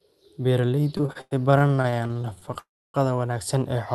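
From 0.97 to 2.57 s the speech suffers repeated stalls (stutter): 27 short gaps across that span, the longest about 99 ms, together roughly half a second of filled-in audio, close to a third of the stretch. Packets reached the receiver late or too slowly, so the jitter buffer kept draining and the decoder extended the last sound each time. Nothing is lost, but the speech drags and judders.

Immediately after, from 2.59 to 2.96 s, comes a call audio freeze. The sound halts for about 348 ms: a brief continuation of the last sound fades away, leaving about 280 ms of silence before the speech resumes exactly where it stopped, now that much later. This is likely a single longer hold-up of packets in transit that emptied the jitter buffer, inserting a gap without removing anything. Throughout, the Opus call path cuts off the high frequencies above about 12 kHz.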